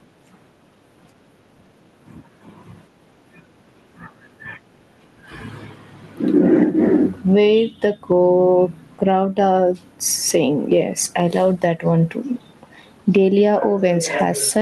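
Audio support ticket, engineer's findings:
Gain pumping, whole clip. Gain swings around 10 dB under each loud syllable, with loud and soft passages squashed together. Likely cause: input gain set far too high, a fast limiter or compressor clamping each peak. Call path rolls off above about 12 kHz, consistent with Opus at a moderate bitrate.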